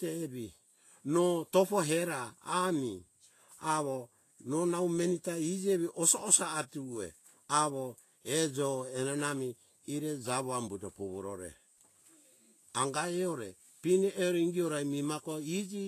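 From start to finish the speech carries plainly audible lossy-coding damage, most likely Vorbis compression at a low setting, with a density of artefacts that fits a bitrate around 32 kbps. Nothing remains above 14.2 kHz, so the very top of the spectrum is simply gone. Below that cut-off the treble has been quantised so coarsely that fine detail is replaced by noise of similar energy, giving sibilants a hissy, grainy texture, roughening tonal parts and smearing consonant attacks.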